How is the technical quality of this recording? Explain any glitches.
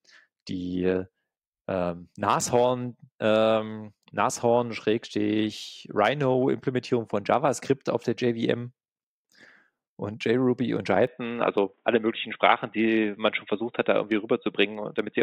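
The recording holds its full bandwidth until 11.07 s, when the speech abruptly turns dull and boxy and stays that way to the end. Nothing above 3.8 kHz survives from that point. This is an input switched to a poorer device, likely a change to another microphone or a headset's call profile. The narrower band, a different tone and a faint new noise floor far below the speech set it apart from a plain low-pass filter. The switch itself is seamless, with no gap and no real jump in level.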